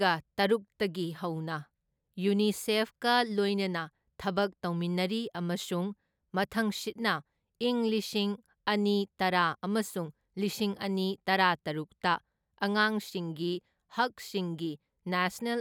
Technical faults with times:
none

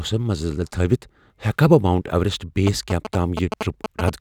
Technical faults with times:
2.67-4.10 GSM signalling bursts

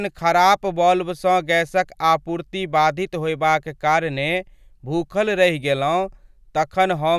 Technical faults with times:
none

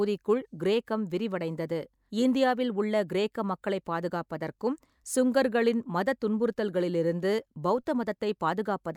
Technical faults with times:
none

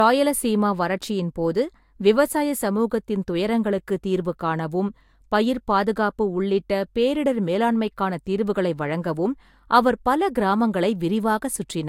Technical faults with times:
0.00-11.88 low-bitrate audio saved at a high bitrate

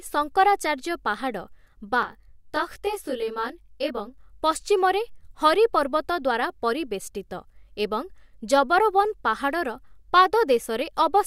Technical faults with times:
2.03-4.18 channel delay (comb filtering)

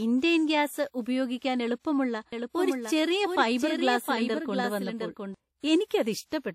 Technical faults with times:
0.00-6.55 WMA compression
2.32-5.34 doubled audio track
5.85-5.91 pre-echo

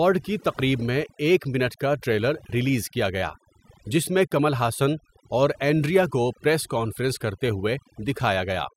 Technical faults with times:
0.00-8.77 overdone noise removal

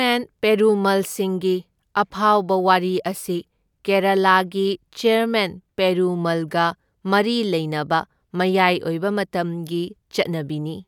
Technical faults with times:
none

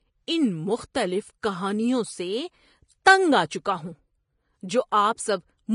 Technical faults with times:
0.00-5.75 Vorbis compression
1.42 pre-echo

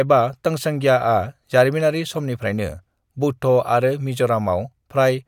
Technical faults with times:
none

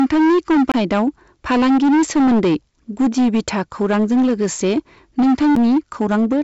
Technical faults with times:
0.00-6.43 hard clipping
0.72-0.74 CD skip
5.55 CD skip

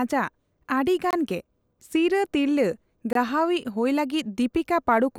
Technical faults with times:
1.11-1.13 gap between chunks
3.13-3.15 gap between chunks

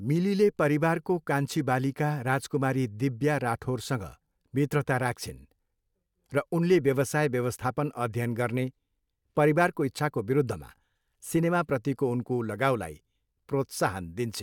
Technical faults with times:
none

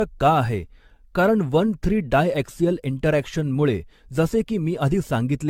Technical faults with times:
0.00-5.50 generation loss

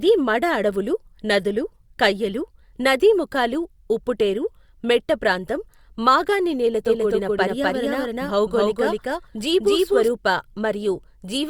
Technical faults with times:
6.86-10.08 doubled audio track

